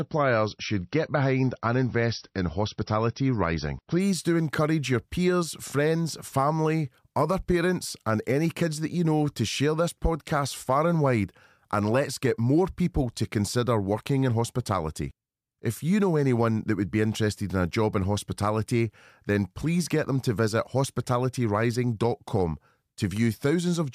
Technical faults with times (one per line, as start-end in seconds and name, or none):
0.00-4.00 adaptive stream starting at a low bitrate